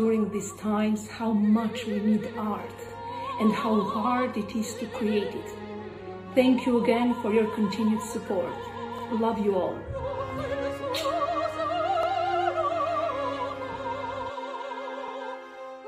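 At 2.89, 5.94, 8.99, 12.03 and 15.08 s there's a stutter, a classic case of overlapping chunks. The audio was handled in 3.0-second blocks that each started slightly early, so about 48 ms gets replayed at every join, giving a regular hiccup.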